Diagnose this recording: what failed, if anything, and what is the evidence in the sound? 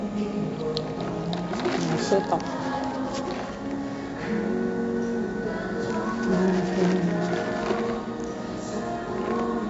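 The codec stage failed: 4-bit ADPCM compression runs throughout, with heavy gritty hiss that rises and falls with the signal and nothing above 7.7 kHz, which fits 64 kbps. On a spectrogram, level-tracking broadband noise fills under each loud event beneath a hard ceiling.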